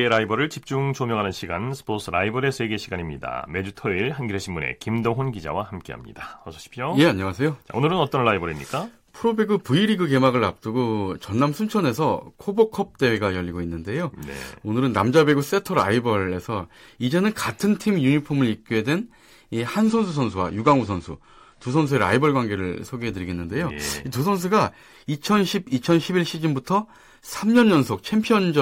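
At 19.88 s the speech abruptly loses its brightness: everything above about 9.8 kHz disappears, the top end turns thin, and artefacts rise for two seconds until quality snaps back at 21.88 s, with no gap at either edge. This is an adaptive stream at a lower bitrate. The connection slowed, so the player switched to a leaner encoding, which fits a step down from roughly 96 to 32 kbit/s AAC.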